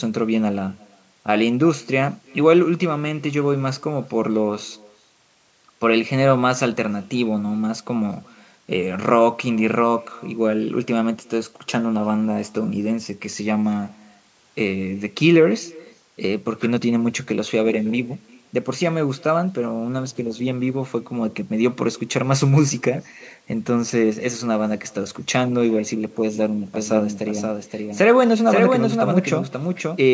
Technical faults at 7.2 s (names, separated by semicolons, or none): echo with no canceller